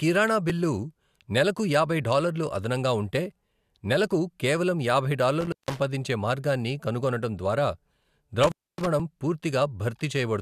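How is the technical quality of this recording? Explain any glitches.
The speech is interrupted twice by an intermittent contact. From 5.41 to 5.80 s and from 8.43 to 8.87 s, it cuts out for about 160 ms and 270 ms with crackle at each edge, leaving faint hiss. A loose cable or plug briefly opened the signal path.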